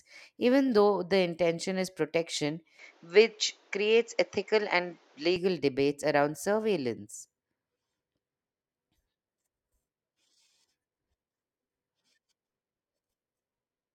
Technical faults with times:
2.79-5.36 input switched to a poorer device

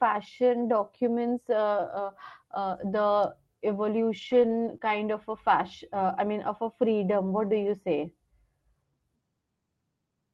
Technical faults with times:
1.53-1.59 lost packet rebuilt from error correction
2.83-2.85 lost packet rebuilt from error correction
4.17-4.95 lost packet rebuilt from error correction
4.77-4.81 short concealed packet loss

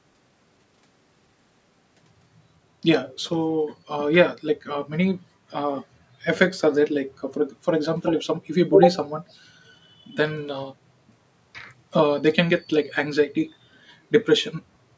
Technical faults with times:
8.02-8.27 echo leak
14.92-14.97 background gated by the echo canceller

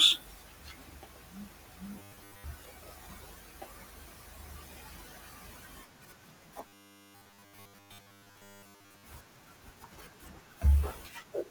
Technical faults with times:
1.99-2.44 robotic sound from repeated short buffers
6.67-9.03 robotic sound from repeated short buffers

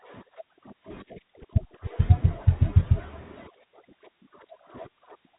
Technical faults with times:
none

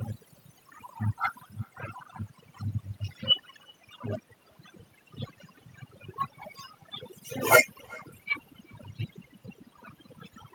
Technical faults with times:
0.00-10.54 overdone noise removal
0.00-10.54 echo with no canceller

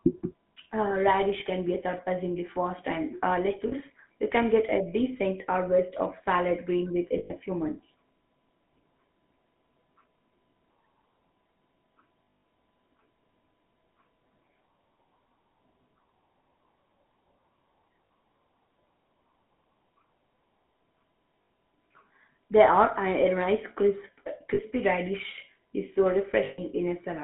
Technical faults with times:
0.00-27.24 GSM full-rate codec
1.40-1.43 lost GSM frames
3.68-3.73 lost GSM frames
7.18-7.31 lost GSM frames
12.24-12.44 lost GSM frames
18.07-18.09 lost GSM frames
21.42-21.50 lost GSM frames
24.54-24.60 lost GSM frames
26.44-26.59 lost GSM frames

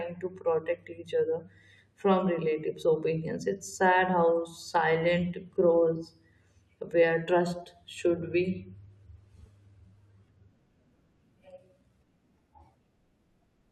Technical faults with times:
none

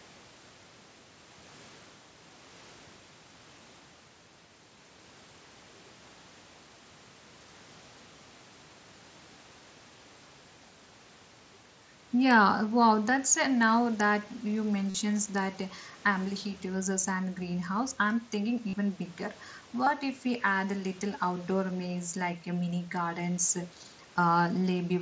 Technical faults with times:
14.90-14.95 concealed Bluetooth headset packet loss
18.69-18.73 concealed Bluetooth headset packet loss
19.84-19.87 concealed Bluetooth headset packet loss

